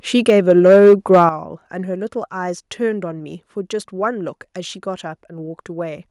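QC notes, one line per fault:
0.28–1.23 s, microphone overload: the loudest syllables pick up a harsh, crackly edge where their peaks get squared off. The mic input was likely set too hot, driving peaks about 4 dB past the converter's ceiling, so roughly one sample in twenty got clipped.
0.30 s and 1.29 s, microphone volume stepped down: voice and background drop abruptly together, first by about 3 dB, then by about 9 dB. That's likely the call software hearing the overload and knocking the mic's input gain down in single steps.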